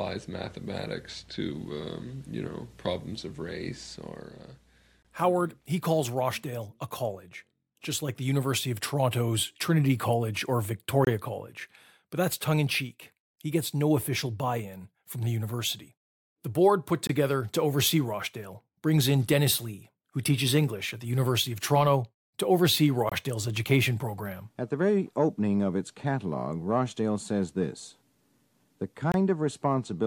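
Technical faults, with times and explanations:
5.03, 11.05, 17.07 (between "board put" and "to oversee"), 23.09 and 29.12 s: gap between chunks, hard-edged 23 ms silences every 6 s where the audio is interrupted at each chunk join.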